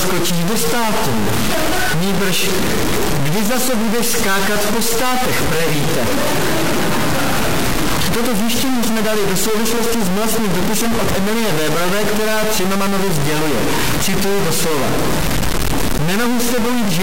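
From start to finish the audio carries a distortion. Quiet gaps do not fall silent. They fill with noise instead. The likely cause is a stuck bit, where one data line or converter bit stays fixed at 0 or 1. About half the samples are then wrong by that bit's weight, in a pattern that follows the waveform. Near zero the error flips with the sign, so the pauses turn noisy.

From 15.26 to 16.75 s, periodic USB or driver dropouts appear. A short slice of audio goes missing every 0.25 s, about seven times in all. Each loss lasts only a fraction of a millisecond. The audio is skipped, not replaced by silence, so the waveform jumps where the pieces join. Each jump gives a regular tick. The even spacing points to a background task briefly blocking the bus or driver.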